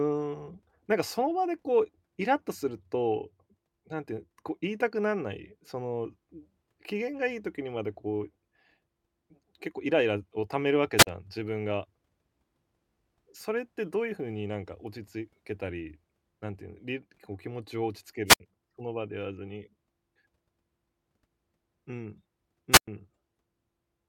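Wireless microphone squelch dropouts occur at 10.97–11.07 s, 18.27–18.40 s and 22.72–22.88 s, with mutes of 45, 67 and 106 ms. The fading radio signal lets hiss rise before the receiver mutes, which distinguishes them from clean digital dropouts.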